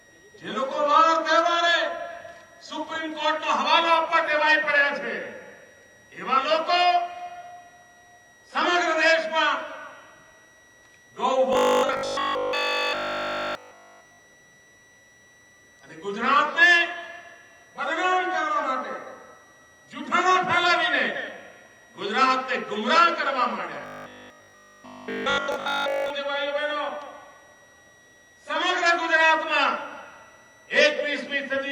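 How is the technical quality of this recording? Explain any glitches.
The recording has two problems: a steady whistle throughout and two stretches where the sound turns mechanical.

A switching supply whistle runs the whole time, near 2 kHz, drifting between 1.89 and 1.96 kHz, roughly 30 dB below the sound. Unlike a fixed hum, its pitch wanders.

Robotic sound from repeated short buffers appears at 11.53–14.19 s and 23.82–26.10 s. A rigid 50 Hz buzz replaces the sound entirely, likely from a 20 ms buffer looping while new audio is skipped.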